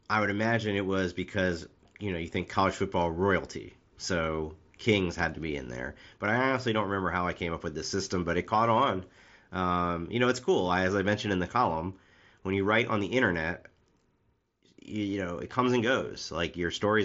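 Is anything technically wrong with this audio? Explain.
No, nothing's technically wrong here; it's speech carried over a Bluetooth mSBC headset link, so the audio stops at about 7.7 kHz, which is just how that wideband headset codec works.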